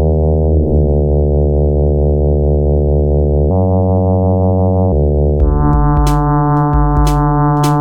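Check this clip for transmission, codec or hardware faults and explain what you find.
One fault: a section at the wrong speed from 3.50 to 4.92 s, likely from playback against a mismatched clock, runs 1.27 times fast, so the music jumps about four semitones higher and hurries.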